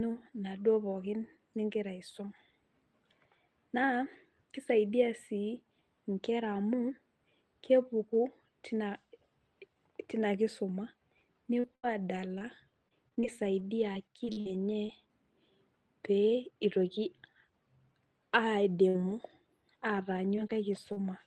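From 11.59 to 14.90 s there is repeated packet loss with a robotic sound. About a dozen holes follow one another closely, together losing about 380 ms of audio, the longest 77 ms. Each is patched by extending the preceding sound, leaving a choppy texture with pieces missing.

Between 18.88 and 21.06 s come scattered short gaps. About four isolated dropouts, the longest around 50 ms, take out 140 ms in total. Each is bridged by continuing the last sound, so the audio stays mostly clear between the gaps.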